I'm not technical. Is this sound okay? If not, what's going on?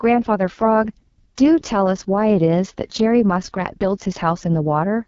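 No, it isn't clean. The speech has gone through the AMR wideband (HD Voice) codec at one of its lowest settings, which makes it sound rough and raspy all the way through. The phone-style compression is squeezing the voice hard, and there's nothing above about 7.4 kHz.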